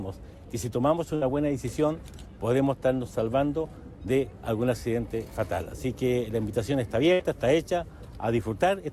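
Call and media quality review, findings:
Burst of packet loss at 1.15–1.23 s and 7.13–7.21 s. Symptom: the last sound is stretched for about 60 ms, fading in level, and then the audio resumes about 60 ms further on, with that stretch missing. Probable component: receive-side jitter buffer and loss concealment. Mechanism: consecutive packets lost or arriving too late; the concealer repeats and attenuates the previous audio across the gap instead of playing the lost content.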